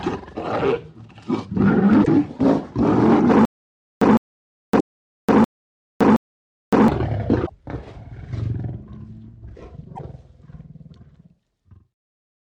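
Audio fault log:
2.01–2.08 s, 4.77–4.81 s, 7.43–7.50 s, 9.93–10.00 s: damaged data in a compressed stream. Each is a single brief glitch where the decoder misread corrupted frames and resynced at the next header. Unlike the stutter, nothing repeats.
3.45–6.88 s: stutter with silent gaps. The same 157 ms fragment plays five times, each followed by about 563 ms of digital silence, a steady 720 ms cycle. This is likely a stalled player replaying its last buffer on each retry, and the audio belonging to that span is lost.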